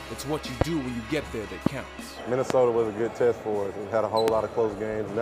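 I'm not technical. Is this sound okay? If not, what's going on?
No. There are four loud pops at 0.61, 1.66, 2.50 and 4.28 seconds. Each is a sharp, brief snap, far louder than the sound, which carries on underneath. The likely cause is a sudden electrical jolt from a plug, switch or static.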